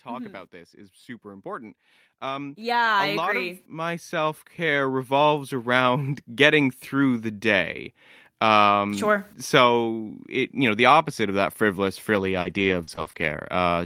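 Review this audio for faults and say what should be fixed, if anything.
Automatic gain rising at 0.05–1.56 s (about 3 dB) and 2.2–6.38 s (about 14 dB, ending just before "through the day"). The gain control slowly lifts speech and background together. Set a proper input level so the gain control has no reason to climb.

Repeated packet loss (robotic sound) at 12.15–13.37 s, right after "opposite of that frivolous". There are five short holes, the longest 40 ms, each patched by stretching the preceding sound, which gives a choppy, robotic stretch. Add forward error correction and a deeper jitter buffer on the network path.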